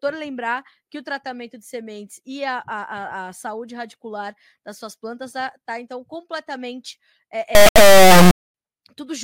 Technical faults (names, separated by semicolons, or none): integer read as float